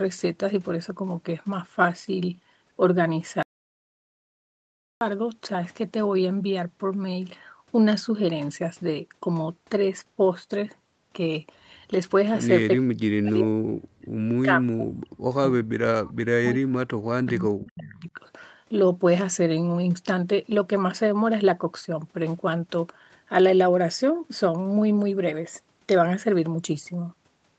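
Audio dropout to silence runs from 3.43 to 5.01 s: the speech cuts off abruptly and about 1.59 s of silence follows, with no room tone, before the sound resumes mid-flow. This is likely a lost input, with the recorder writing silence until the signal returned.

Speech suppressed in double talk appears from 12.78 to 14.24 s and again from 14.45 to 18.2 s. The voice sinks in pieces, at its deepest roughly 40 dB down, for around 1.5 s in the first stretch and 3 s in the second. The likely cause is an echo canceller that could not separate its own talker from the loudspeaker echo and attenuated both.

Echo leak shows up briefly from 17.92 to 18.01 s as a faint delayed copy of the voice, trailing by 387 ms and about 30 dB below the speech. It likely comes from a loudspeaker path whose echo canceller failed to remove all of the microphone pickup and sent the remainder back.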